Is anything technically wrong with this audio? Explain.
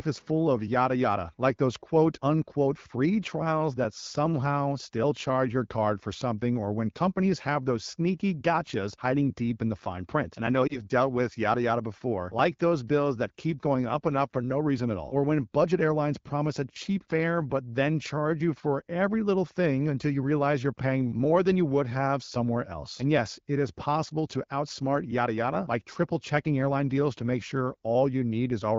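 Yes. There is a lost AMR speech frame at 10.67 to 10.80 s, between "I know" and "dealt with yada yada". A frame failed its checksum, so the decoder reused earlier settings at falling gain. The result is a brief dip or warble, which fits a single lost 20 ms frame.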